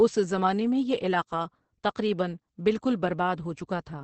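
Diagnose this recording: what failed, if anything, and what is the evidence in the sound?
Muffled, hoarse, slightly robotic speech throughout, with nothing above 8.4 kHz: codec-stage damage from Opus voice compression in SILK wideband mode, consistent with roughly 10 kbps.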